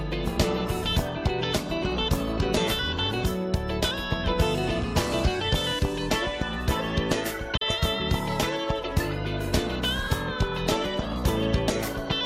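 At 7.57 s the sound drops into a short dip lasting to about 7.62 s. This is AAC frame loss with muting: a block of coded audio never reached the decoder, which filled its spectrum with zeros. The roughly 43 ms dip fits a single lost frame. Overlapping transform windows taper the signal down and back up, so the dip has soft edges. A spectrogram shows a narrow vertical band of reduced energy across all frequencies, and the waveform shows a brief envelope dip.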